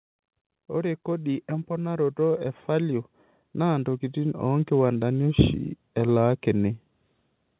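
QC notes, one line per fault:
0.67–6.74 s, automatic gain rising: the gain control lifts quiet input slowly, about 11 dB. The background swells with the speech, unlike a talker moving closer.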